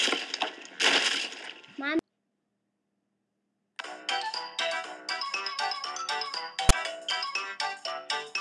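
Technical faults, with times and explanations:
6.69 s, file tags played as audio: a 13 ms block of text tags is read as if it were samples, so character bytes become a brief rasp offset to one side of zero. Being this short, it lands as a loud snap, a thin broadband vertical stripe on a spectrogram and an off-centre, hard-edged blip in the waveform.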